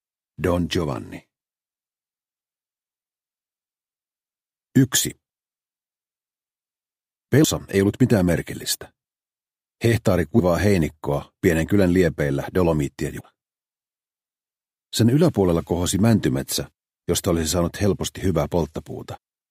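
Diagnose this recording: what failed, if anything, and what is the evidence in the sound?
The codec stage failed, with damaged data in a compressed stream. Brief blips occur at 7.43 s, 10.38 to 10.40 s, 13.19 to 13.21 s and 19.16 s. At each one, corrupted bytes made the decoder misread frames, lose sync and hunt for the next frame header.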